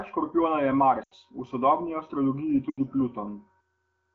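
Lost AMR speech frames at 1.03 to 1.14 s, between "škorpijona je" and "v sodobni", and again at 2.70 to 2.80 s. Each gap lasts about 80 ms, which fits a run of four 20 ms frames failing their checksum over the radio link. The AMR wideband decoder fills each gap by repeating the last good pitch and vocal tract settings at falling gain, so the speech smears and quickly fades toward silence, then resumes weak and rough for a moment.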